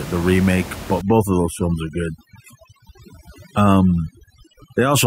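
From 1.01 s to the end of the clip, the speech shows overdone noise removal. A noise reducer set far too aggressively is gating individual frequency bands down to almost nothing whenever their level sits close to its noise estimate. The room noise, about 15 dB below the speech, is largely stripped out, leaving near silence dotted with twinkling artefacts. Low-level parts of the voice fall under the same threshold, so they are stripped out along with it.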